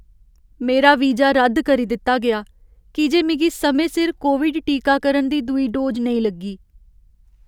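No technical faults can be heard anywhere in the recording, and the signal stays continuous and steady throughout.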